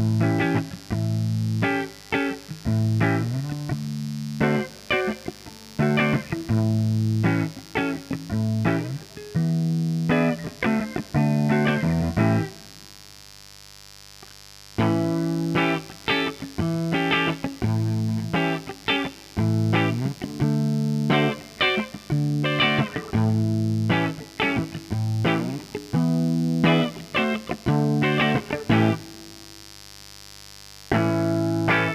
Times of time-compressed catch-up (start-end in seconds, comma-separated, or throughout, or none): none